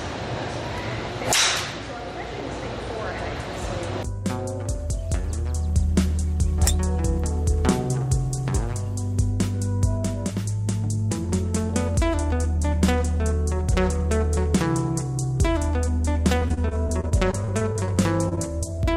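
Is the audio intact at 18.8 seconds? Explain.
No, short concealed packet loss spans 18.76 to 18.80 s: about 20 ms never arrived, and the receiver extended the preceding sound, leaving a brief smear or wobble.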